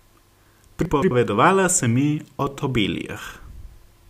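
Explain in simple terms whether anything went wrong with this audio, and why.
Between 0.85 and 1.11 seconds the speech jumbles briefly. This is chunks out of order: one 85 ms piece arrived late and played two pieces too late.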